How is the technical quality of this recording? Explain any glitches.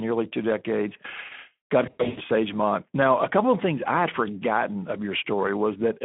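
The recording is speech with two clear technical faults: a narrow, hoarse codec sound throughout and a short dropout glitch near the two-second mark.

For the full length of the clip, the speech sounds thin and grainy, with a rough edge. It is confined to a telephone-like band of about 200 Hz to 3.5 kHz. This is Speex codec damage. Speex models the voice with a filter and a coded excitation, and at a low rate there aren't enough bits to reproduce the excitation faithfully. The hoarseness fits a setting of roughly 11 kbps.

From 1.85 to 2.2 s, the speech breaks into a stretched sound that fades and then recovers unevenly. This is VoIP packet loss concealed by the speech codec. About 240 ms of audio went missing, scattered across roughly 320 ms, and the longest single gap lasted 100 ms. For each gap, the decoder repeated its last pitch and filter at falling gain, and because each frame builds on the previous one, the sound stays weak for a moment after the audio resumes.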